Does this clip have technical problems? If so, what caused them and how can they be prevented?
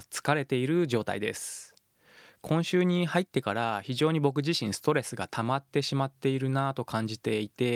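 No, this speech clip has no technical problems to report. With no fault present, there is nothing here that needs preventing.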